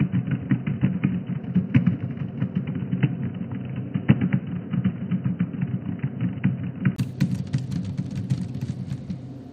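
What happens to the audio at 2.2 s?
At 2.2 s two faults overlap. From 1.40 to 2.66 s the Bluetooth link shows an SBC bit pool drop: under congestion the encoder lowered its bit pool to keep audio flowing, and the sound points to a fall from around 28 to about 11, or roughly 90 kbps. With so few bits the upper sub-bands are starved and the rest coarsely quantised, so the treble goes dull and a gritty, grainy noise rides on the sound until the rate recovers.

Underneath, from the start until 6.98 s, the capture likely came from an input switched to a poorer device, such as another microphone or a headset's call profile. Nothing reaches above 3 kHz, so the sound is boxy and band-limited, with a faint new noise floor far below the signal and no real change in level. At 2.2 s the bit pool starvation sits on top of that already narrowed band.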